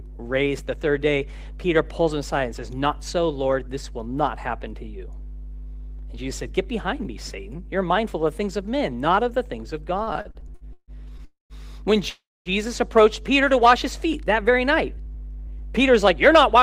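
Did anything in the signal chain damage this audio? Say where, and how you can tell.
Yes. A ground loop or nearby transformer in the analogue wiring is coupling the power line in. It shows up as mains hum, a steady 50 Hz tone with low harmonics under the whole clip, strong enough to sit only about 5 dB below the speech.

On the network side, packets repeatedly arrived late and the jitter buffer kept running dry. This caused repeated stalls (stutter) from 9.97 to 11.22 s: ten short holds, the longest 149 ms, filled by stretching the last sound. They add 375 ms in all without losing anything, so about 30% of that stretch drags.

Two call audio freezes follow, at 11.25 to 11.53 s and 12.10 to 12.49 s, likely from packets held up in the network. In each, the last sound carries on and fades out, with 130 ms and 230 ms of silence. The speech resumes where it stopped, 250 ms and 358 ms later, with nothing missing.

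After those delays the buffer held too much audio, so call processing trimmed pitch-period-sized slices to catch up. This jitter buffer speed-up from 14.50 to 16.55 s runs the speech at 103% at unchanged pitch, removing about 70 ms.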